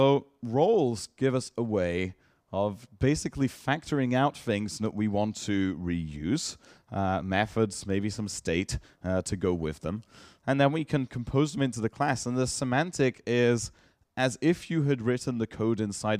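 No technical faults can be heard anywhere in this audio. There is nothing to place on the timeline and nothing that needs correcting.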